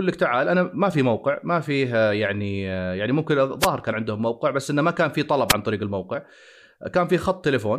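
The analogue FM radio link fades as reflections cancel, causing wireless microphone noise hits: brief static swishes over the speech at 3.60–3.68 s and 5.49–5.53 s.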